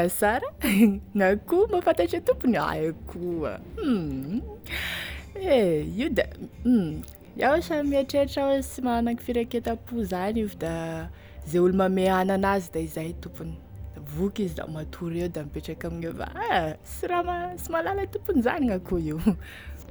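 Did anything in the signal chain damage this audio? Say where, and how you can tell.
No, the signal chain left this speech recording undamaged, with nothing at any stage from capture to playback that altered or degraded the signal.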